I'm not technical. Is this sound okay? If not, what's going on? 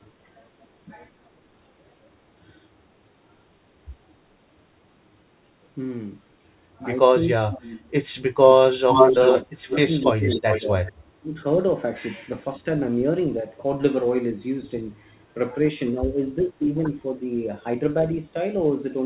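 No. In two ways in this clip, the call's echo canceller seems to have struggled.

First, speech suppressed in double talk. When both people speak at once, the echo canceller has to tell the talker's own voice from the other side coming out of the loudspeaker. Here it likely could not, so it turned everything down. The speech dips sharply or drops out in pieces from 7.12 to 7.85 s, 8.45 to 8.89 s, and 9.44 to 11.4 s. It fades more gently from 15.92 to 16.69 s, with a slight, brief dip at 12.60 to 12.66 s.

Second, an echo leak. The other side was likely on a loudspeaker, and its echo canceller did not fully remove what its microphone picked up, so some of that sound was sent back. From 8.92 to 10.62 s you hear a second copy of the speech about 0.38 seconds behind, roughly as loud as the original, which makes that stretch sound doubled and confusing.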